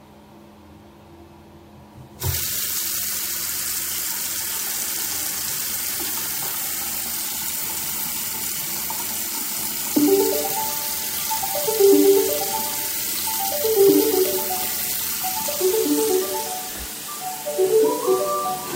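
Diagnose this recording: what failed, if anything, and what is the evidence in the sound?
A resampler restarted on every block, in the sample-rate conversion stage of the buffer path. Throughout, a faint 50 Hz buzz rides on the sound and vanishes in silences: edge errors repeating every 20 ms. The converter, likely taking 44.1 kHz material to 48 kHz, lost its history at each block boundary. A spectrogram shows evenly spaced vertical streaks, a 50 Hz comb, only where signal exists. The waveform shows small steps at each boundary.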